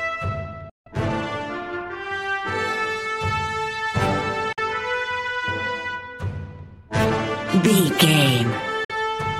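The sound cuts to silence at 0.69–0.88 s, then briefly at 4.53–4.59 s and 8.84–8.91 s, resuming each time as though it had played on underneath. These gaps are likely a Bluetooth dropout, with late packets discarded before reaching the headphones.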